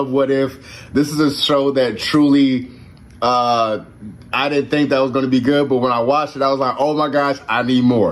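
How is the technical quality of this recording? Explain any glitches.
The recording has a clear technical problem. Gain pumping runs throughout: loud and soft parts are squashed closer in level, with the gain swinging roughly 15 dB, likely from excessive input gain hitting a fast limiter.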